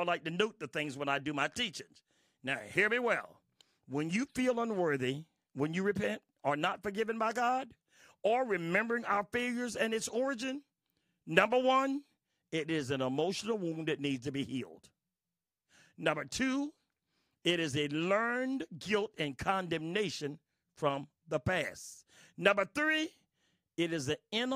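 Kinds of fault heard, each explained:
Nothing stood out on listening to this speech recording.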